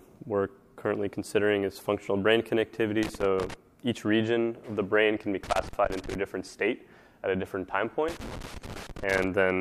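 Three bursts of loose connector crackle break up the audio, from 3.03 to 3.54 s, from 5.44 to 6.15 s, and from 8.08 to 9.27 s, the last being the longest at about 1.2 s. Each is an irregular scratching texture where a worn or dirty contact is making and breaking as it shifts, chopping the signal on and off in rapid succession.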